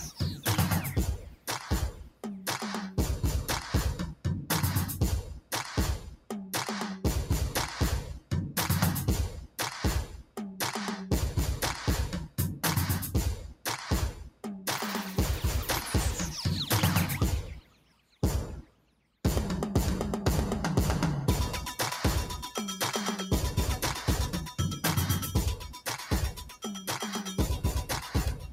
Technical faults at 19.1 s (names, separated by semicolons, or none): noise suppressor applied to music or sounds; sound cut by the noise suppressor